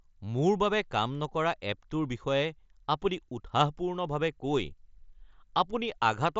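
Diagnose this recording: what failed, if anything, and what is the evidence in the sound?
Nothing failed in this recording.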